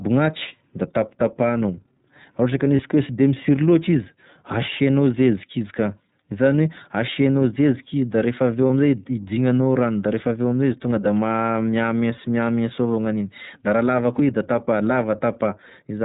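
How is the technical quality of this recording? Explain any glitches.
The recording is usable for intelligibility but technically degraded, with plainly audible codec damage and two brief dropouts.

Throughout, the speech carries iLBC codec coloration. Nothing above 4 kHz survives. Each 30 ms frame is coded on its own, which fits iLBC's 13.33 kbps mode. The result is band-limited, slightly rough, synthetic-sounding speech.

At 2.76 s and 8.67 s there are lost iLBC frames, each about 30 ms, consistent with a single missing frame. The decoder fills each gap by repeating the last pitch cycle blended with noise. This gives a short held, buzzy vowel before normal speech resumes almost immediately.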